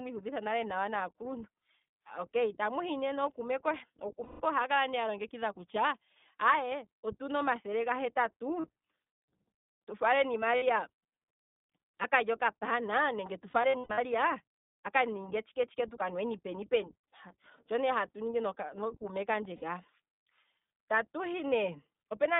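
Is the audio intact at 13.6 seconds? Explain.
No. Between 13.50 and 13.99 s, iLBC frames were lost, about 300 ms of audio scattered across that half-second, with the longest gap around a tenth of a second. The decoder covers each gap by repeating the last pitch cycle with added noise, so this stretch is marked by a held, slightly buzzy, breathy vowel-like sound before normal speech snaps back.

This sits on top of the iLBC codec that runs through the whole clip, at 15.2 kbps with 20 ms frames. The phone-style band of 200 Hz to 3.6 kHz removes all treble, and the coding damage is plainly audible, leaving the speech a little rough and synthetic, including at this moment.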